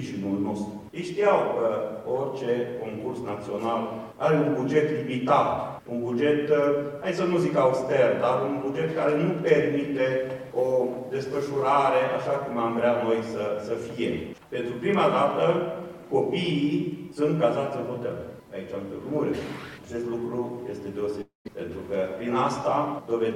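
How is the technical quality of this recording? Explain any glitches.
The recording has one glitch, a long network dropout, from 21.21 to 21.47 s. The sound there smears into a buzzy, fading continuation of what came just before, sinks to near-silence for roughly 150 ms, then resumes with about 240 ms of material missing. The likely cause is that the stream stopped arriving and the receiver stretched the last audio to cover the gap. Unlike a brief packet-loss click or a clean edit, this gap is long enough to hear the fill fade out.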